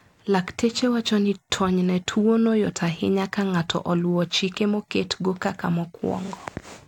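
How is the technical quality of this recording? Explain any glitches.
No glitches or technical faults can be heard here.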